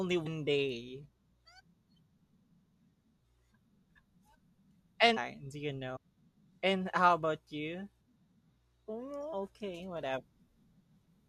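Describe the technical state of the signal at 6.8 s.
The speech signal at 6.8 s is intact, with no technical fault present at that moment.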